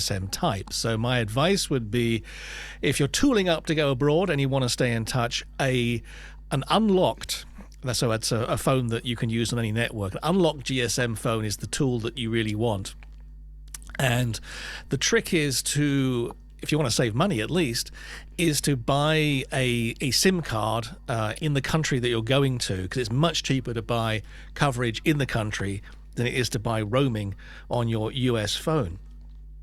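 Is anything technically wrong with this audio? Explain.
Yes. Mains hum runs through the whole speech clip: a ground loop or nearby transformer is leaking the 50 Hz power line into the signal, producing a steady low drone with some low harmonics, sitting around 20 dB below the speech.

Frames out of order occur twice, where neighbouring stretches of the stream were decoded in swapped order. At 18.34 to 18.37 s, between "save money at least" and "is to buy a", two 20 ms blocks trade places. At 21.33 to 21.46 s, between "card uh" and "the country that you're", two 40 ms blocks swap, which fits pairs of 20 ms frames. Each sounds like a brief garbled flutter, and no time is lost.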